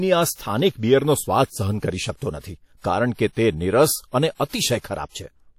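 Likely WMA compression at a low bitrate, around 48 kbps, throughout: the speech sounds washy and ringing, with hiss breathing alongside it and nothing above 17.4 kHz.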